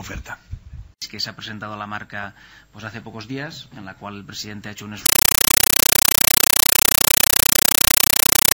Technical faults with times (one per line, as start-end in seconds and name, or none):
5.06-8.54 compressed stream played as audio